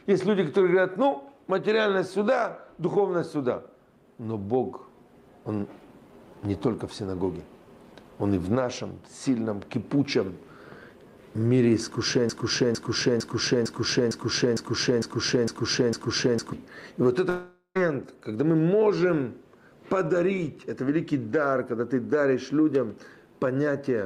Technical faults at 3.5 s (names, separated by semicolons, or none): none